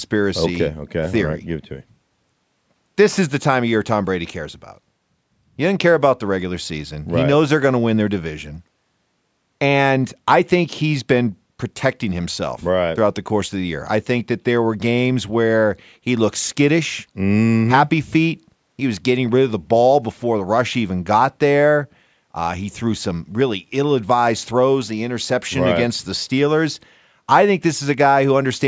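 No technical faults can be heard in the speech; the signal carries the ordinary imprint of call microphone processing, with the lowest bass trimmed away and nothing above 8 kHz.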